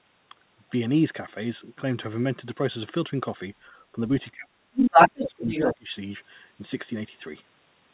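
Speech suppressed in double talk appears first at 3.70 to 3.75 s as a brief, slight dip in the talker's level. It returns far more severely from 4.31 to 5.96 s, where the voice drops deeply for most of that stretch. The likely cause is an echo canceller that could not tell the near talker from loudspeaker echo while both sides spoke, so it turned everything down.

The other side's voice leaking through can be heard from 4.75 to 5.75 s, inside the suppressed stretch. A second voice comes through, band-limited like the rest of the 4 kHz call audio, likely residual loudspeaker echo that the echo canceller failed to remove from the microphone signal.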